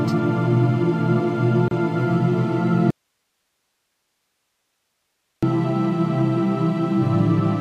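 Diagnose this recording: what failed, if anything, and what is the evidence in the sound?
A short silence of about 31 ms cuts into the continuous sound at 1.68 to 1.71 s, with its edges smeared by the codec, and the sound resumes exactly where it stopped. This is a gap at a join of encoded pieces: separately encoded segments were spliced untrimmed, leaving encoder start delay and final-frame padding in place.

From 2.90 to 5.43 s the sound drops abruptly to bare hiss roughly 55 dB below its normal level, then returns just as suddenly after about 2.5 s. This audio dropout to a faint residue was likely a loss of the input signal while the downstream path stayed live.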